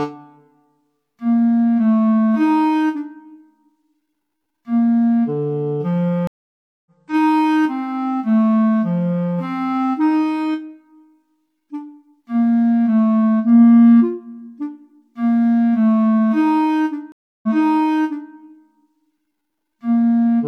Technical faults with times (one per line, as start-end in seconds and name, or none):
6.27-6.88 stream reconnect
17.12-18.31 stream reconnect